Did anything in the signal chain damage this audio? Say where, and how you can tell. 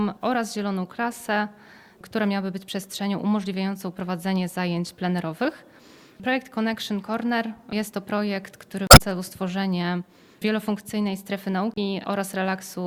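Yes. The codec stage was fed damaged data in a compressed stream: corrupted bytes in the encoded file sent the decoder out of sync, so it misread those frames and then hunted for the next valid frame header before resuming. You can hear this as a brief disruption from 8.87 to 9.01 s, and a shorter one from 11.74 to 11.78 s.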